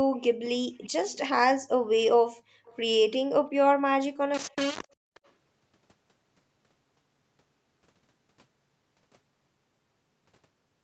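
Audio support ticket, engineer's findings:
Echo leak: faint delayed repeats of the speech at 0.82–0.89, 1.06–1.24, 2.65–2.78, 4.49–4.56, 4.83–4.88 and 5.14–5.31 s. They lag by 345 ms, then 370 ms from 4.49 s, at about 30 dB, then 35 dB, down. The likely cause is far-end AEC residual returned. Spectrogram shows ghost copies of the preceding harmonics.

Background gated by the echo canceller: room tone ducks from 2.37 to 2.65 s, about 300 ms, by roughly 40 dB, and comes back as the echo at 2.65 s begins. The AEC suppressor clamped the mic. The waveform noise floor flatlines, and the spectrogram shows a dark vertical gap.

Low bit depth without dither: grainy, signal-following distortion from 4.34 s to the end, with quiet tails sputtering or cutting to silence. The error sits about 20 dB below the signal, which points to roughly 4-bit undithered rounding, likely a requantisation stage. The waveform is visibly staircased, with broadband hash tracking the speech.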